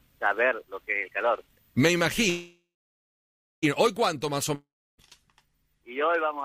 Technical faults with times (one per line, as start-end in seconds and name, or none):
2.29-3.64 call audio freeze
4.54-5.00 long network dropout